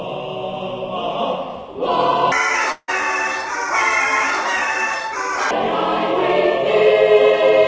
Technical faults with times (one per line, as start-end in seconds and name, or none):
2.32-5.51 section at the wrong speed
2.72-2.90 long network dropout